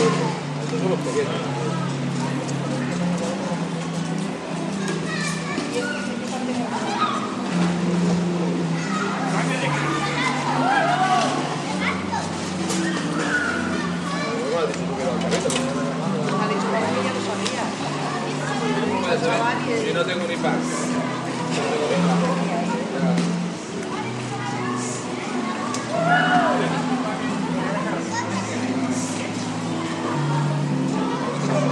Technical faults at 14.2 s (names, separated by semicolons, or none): none